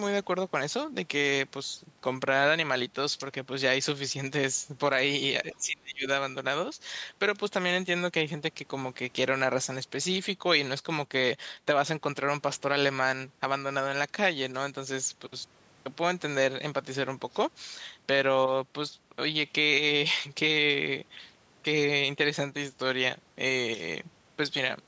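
From 5.53 to 6.07 s the speech sinks sharply, roughly 30 dB at its deepest, for about half a second. This is speech suppressed in double talk: an echo canceller likely mistook the talker for loudspeaker echo while both sides spoke.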